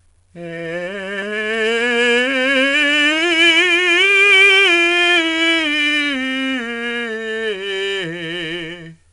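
From start to finish, the music carries 4-bit ADPCM compression. Each sample is stored as a small step from a predicted value, and the step size adapts as the audio moves. The coding error is plainly audible. It rides on the music as a gritty hiss that rises and falls with the level. Sharp attacks distort where the step cannot grow fast enough. Nothing remains above 10.7 kHz, so the top sounds dull. This fits a stream of about 88 kbps.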